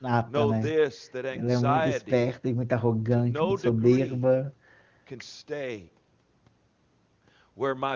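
No technical faults are audible.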